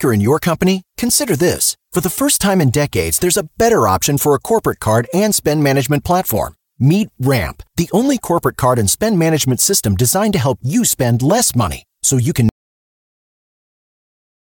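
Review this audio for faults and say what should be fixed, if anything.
At 12.49 s, right after "money so you can", the speech cuts off into silence with no room tone, and it stays silent to the end. This is an audio dropout to silence, likely from the input being lost while the recorder kept writing zeros. To prevent it, secure cables and wireless links and monitor input levels during recording.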